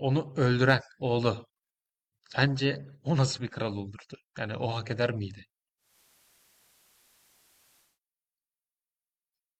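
At 5.77 s the speech cross-fades over 223 ms from digital to the station's FM signal. This is digital radio blending to analogue. The receiver lost the digital stream. Hiss rises, roughly 35 dB below the speech. Level shifts by about 3 dB. Digital returns at 7.99 s.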